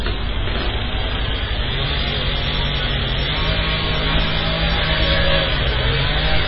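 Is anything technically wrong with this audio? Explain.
Yes. Throughout the clip the audio sounds watery and swirly, with metallic chirping on bright details and softened, smeared attacks. Nothing is present above 5.5 kHz, so the top end sounds dull and boxed in. This is likely heavy MP3 compression, consistent with a very low bitrate around 16 kbps. Starved of bits, the encoder cuts the treble at a fixed point and drops quieter frequency components that flicker on and off between frames, causing the swirl.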